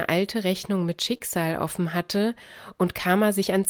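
A speech recording with two closely spaced network faults just before "offen hatte." From 1.13 to 1.15 s there is a lost packet rebuilt from error correction. The 20 ms stretch, which points to a single lost packet, was replayed from a low-bitrate backup copy carried in the following packet. So there is no dropout, but the sound turns briefly coarser and noisier. On a spectrogram this shows as a thin strip with smeared, grainier harmonics, while the waveform stays continuous. Right after, from 1.17 to 1.22 s, comes a short concealed packet loss. About 20 ms of audio never arrived, and the decoder covered it with roughly 23 ms of extrapolated sound continued from what came before, then crossfaded back into the real signal. It is heard as a quick smear or wobble. On a spectrogram the preceding sound briefly carries on before the real audio resumes.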